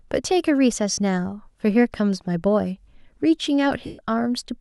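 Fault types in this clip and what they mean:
Lost LE Audio frames: the LC3 decoder papered over dropped Bluetooth frames by replaying the last spectrum with scrambled signs, so the speech smears into a noisy hiss at 0.92–0.98 s, then again for about 130 ms at 3.86–3.99 s, fading out.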